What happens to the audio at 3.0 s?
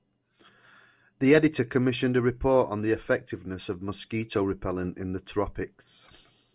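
Nothing goes wrong at 3.0 s; the speech there plays through intact, with no dropout, click or distortion.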